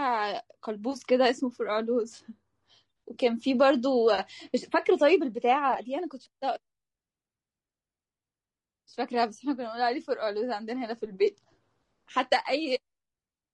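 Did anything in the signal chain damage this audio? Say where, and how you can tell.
Yes, at the codec stage: throughout, the speech sounds rough and grainy, with noise between harmonics, likely from low-delay AAC compression whose short frames blur pitch, consistent with roughly 32 kbps.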